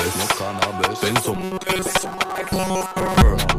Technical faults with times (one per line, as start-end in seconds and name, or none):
1.35-3.23 robotic sound from repeated short buffers
1.47-1.53 short concealed packet loss
1.79-2.52 processor overload crackle